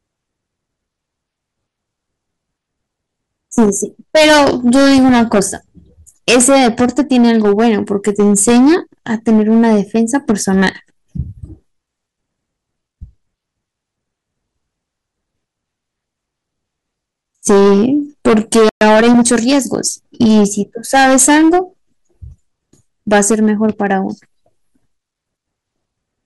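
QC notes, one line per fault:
3.58–3.70, 4.15–5.42, 6.28–8.75, 9.28–10.69, 17.47–17.88, 18.26–20.46, 20.94–21.59, 23.12–23.94 s, hard clipping: harsh fuzz and crackle on loud syllables, because peaks driven about 6 to 14 dB past full scale are cut flat, adding high harmonics.
18.69–18.81 s, playback stall: the speech drops out for 120 ms, then resumes where it stopped, likely because the player ran short of data or its output thread was blocked.
18.81–19.29 s, time-compressed catch-up: speech runs hurried at 1.25x with unchanged pitch, as small pieces are cut out and cross-faded to clear the backlog.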